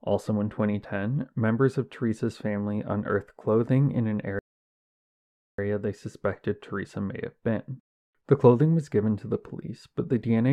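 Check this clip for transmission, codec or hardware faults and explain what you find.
One transmission fault is audible. A rebuffering stall runs from 4.39 to 5.58 s: the player exhausted its downloaded audio and halted until more arrived, inserting about 1.19 s of silence before the speech resumes exactly where it stopped, with nothing missing.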